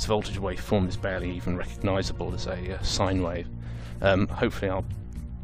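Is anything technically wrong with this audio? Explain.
Yes, there's one glitch. At about 1.6 s some compressed frames are skipped: roughly one frame, around 20 ms of audio, never gets played, either because it's missing from the file or because the decoder rejected it as damaged. The frame length of about 23.2 ms points to that codec frame size. Playback simply jumps ahead.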